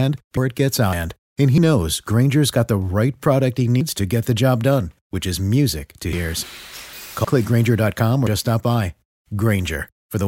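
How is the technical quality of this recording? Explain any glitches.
The recording is marred by seven abrupt skips. At 0.37, 0.93, 6.13 and 7.25 s, about a third of a second vanishes; at 1.58, 3.81 and 8.27 s, about a tenth. Each is a sudden jump with no silence, likely dropped buffers (overrun) joining audio directly across the gap.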